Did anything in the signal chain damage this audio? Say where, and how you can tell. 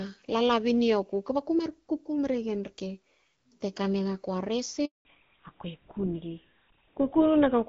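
Yes, two things, both on the network side of the call. At 4.85 s there's a handover gap: the speech dies away almost at once and stays silent for 200 ms, picking up again at 5.05 s. That's the call being handed from one network to another with no speech frames getting through during the switch, so whatever was said in that fifth of a second is gone, not just muted.

Right after that, from 5.05 s to the end, you get a fallback to narrowband. Before the gap the speech has the airy top end of HD Voice, and the light codec texture fits AMR-WB at around 12.65 kbit/s. Afterwards nothing is left above 4 kHz, and the voice turns duller and rougher. The new link settled on an older narrowband codec, which sounds like GSM full rate, and that codec simply can't carry the upper band.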